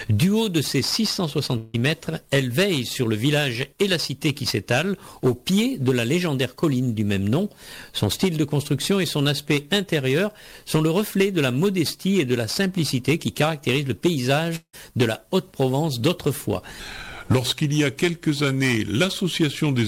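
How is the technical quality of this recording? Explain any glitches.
The recording has three audible glitches: two brief breakups and a slowed, lowered ending.

At 1.57 to 1.76 s and again at 14.56 to 14.75 s, the sound turns into a fading buzz for about 0.16 to 0.18 s. The second one ends in about 70 ms of silence. The likely cause is a long network dropout, where the receiver stretched the last sound over the missing audio, which is never recovered.

From 16.80 s to the end, everything plays at 0.853 times normal speed, dragging and sitting about three semitones low. The likely cause is a section at the wrong speed, where the audio was played against a mismatched clock so that tempo and pitch fell together.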